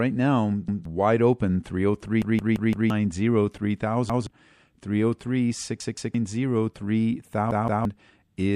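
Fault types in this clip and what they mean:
MP3 compression: throughout this speech the sound is watery and swirly, with smeared consonant attacks and chirpy s sounds, which likely points to MP3 at around 64 kbps. It differs from a filter or a dropout in that the damage shifts from moment to moment.
Repeated buffer: the same slice of about 170 ms plays again with a hard join, which fits an 8192-sample buffer. This happens at 0.68, 4.10, 5.80 and 7.51 s, and four times over at 2.22 s. Unlike a gap, the audio repeats rather than going silent, and roughly 0.7 s is lost at the longest stutter.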